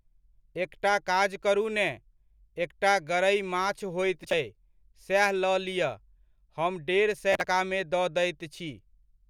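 A speech clip with two bursts of processor overload crackle, from 4.24 to 4.33 s just after "माछ होइत" and from 7.33 to 7.45 s. Each is a gritty tearing made of many tiny hard-edged gaps in a row, which points to a processor missing deadline after deadline on buffers of around ten milliseconds and skipping them. A single dropout would leave one clean hole, and clipping would distort only the loudest peaks. This is a dense string of gaps that stops once the load passes.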